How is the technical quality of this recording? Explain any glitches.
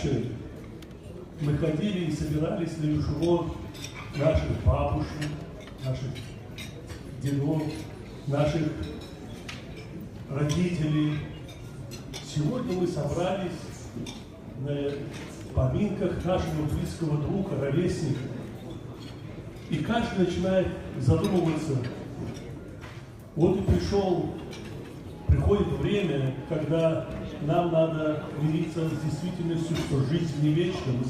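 No glitches or faults are audible.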